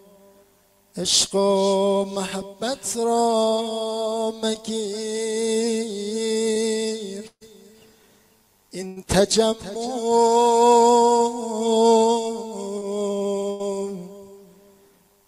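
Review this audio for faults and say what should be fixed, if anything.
Short concealed packet loss occurs at 6.53 to 6.57 s and at 12.78 to 12.87 s. In the first, 20 ms of audio never arrived and the receiver covered it with 20 ms of extrapolated sound. In the second, 40 ms went missing and 30 ms of fill was synthesised, stretching the timeline by a few milliseconds. Each gap was patched by continuing the preceding sound before crossfading back, which leaves a brief smear or wobble.

Burst of packet loss occurs at 7.27 to 7.43 s, 8.87 to 8.98 s and 13.50 to 13.69 s. At 7.27 s, 140 ms was lost and 137 ms of concealment filled it, including about 70 ms of silence. At 8.87 s, 100 ms was lost and 90 ms was filled. At 13.50 s, 100 ms was lost and 93 ms was filled, adding 10 ms. In each case the concealment held and faded the last sound, then playback resumed with that stretch gone.

To prevent both, the network path's loss and jitter should be fixed, and forward error correction or redundant packets with a deeper jitter buffer would let late or lost frames be recovered.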